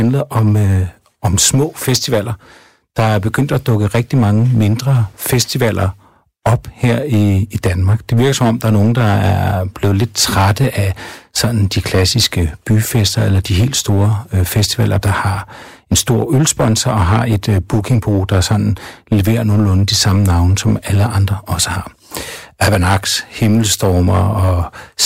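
Speech with hard clipping throughout: the signal was driven about 10 dB past what the stage could pass, so roughly 7 percent of samples are cut flat at the ceiling. Those squared peaks add high harmonics.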